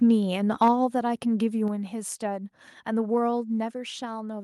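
Microphone overload, from 0.62 to 0.70 s: the loudest peaks of the speech push about 4 dB past the converter's ceiling, and roughly a tenth of the samples in that stretch are flattened at the converter's limit. With their tops sheared off, those syllables pick up a gritty, crackling edge. The likely cause is an input volume set too high for the level arriving at the microphone.

Microphone volume stepped down, at 0.68, 1.68 and 3.72 s: the speech and the background drop together in one abrupt step, by about 3 dB, then about 4 dB, then about 3 dB, with no fade between levels. The first step lands right inside the distorted peak. This likely comes from the call software detecting an over-hot or clipping input and cutting the device's gain each time.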